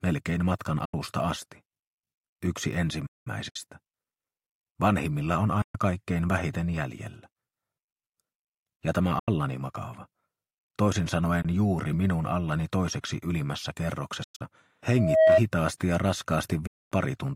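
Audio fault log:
0.85–16.92 s, Bluetooth dropout: the sound cuts to silence at 0.85, 3.49, 5.62, 9.19, 11.42, 14.24 and 16.67 s, for about 81, 61, 122, 81, 20, 142 and 244 ms. At 14.24 s the losses are broken up across about 160 ms, the longest gap about 100 ms. Each time, the sound resumes further along, as if it had kept playing. The lengths step in multiples of roughly 20 ms, which fits whole radio packets likely missing their deadline at the headphones.
3.06–3.27 s, playback stall: the sound halts in mid-flow for about 194 ms, then carries on. This gap is longer than a single lost packet and has no link to the 20 ms steps of the radio gaps, which points to the player likely running dry or being held up. The output stays silent until data flows again, which makes a clear break in continuity.
14.89–15.41 s, loudspeaker feedback squeal: a single tone at 639 Hz swells over about a third of a second to roughly 10 dB above the programme, and it stops at 15.41 s. 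A microphone is picking up the loudspeaker it feeds, and at 639 Hz the loop gain goes past unity, so the tone feeds on itself and keeps growing until something limits it.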